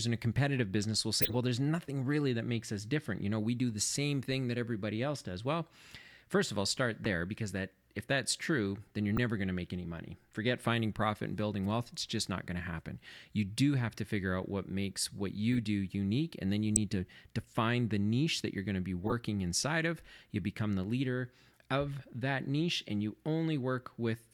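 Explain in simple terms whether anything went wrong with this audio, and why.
Short chirps and bursts of noise break into the speech at 1.22 to 1.36 s, 7.05 s, 9.17 s, 15.53 to 15.59 s, 16.76 s and 19.04 to 19.13 s. Each is a corrupt frame decoded: damaged compressed data was played anyway, putting sound at the wrong pitches.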